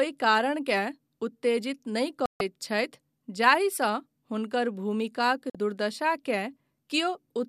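A digital broadcast dropout hits this speech twice: the receiver loses valid frames and mutes, cutting the sound to silence for about 144 ms at 2.26–2.41 s and 48 ms at 5.50–5.55 s.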